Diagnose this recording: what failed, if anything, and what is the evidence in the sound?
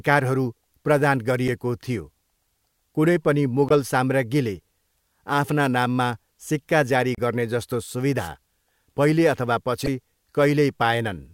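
Two separate things went wrong, at different stages. The first is damaged data in the compressed stream, which happens at the codec or storage level. You get short glitches at 1.48 s, from 3.69 to 3.71 s, from 7.15 to 7.19 s (right after "सिक्का जारी"), and from 9.85 to 9.88 s (right after "पहिले अथवा"). Each one lasts under fifty milliseconds. Corrupt bytes in those frames throw the decoder off. It plays garbage briefly, drops sync, and picks up again at the next clean frame header.

The second is a wireless microphone noise hit, and that's upstream, in the analogue RF link before anything got digitised. From 8.18 to 8.29 s, just after "सिक्का जारी गर्नेजस्तो", there's a swish of static about a tenth of a second long sitting over the speech. The FM receiver lost signal strength as multipath reflections cancelled each other out. Its noise floor came up through the audio until the signal recovered.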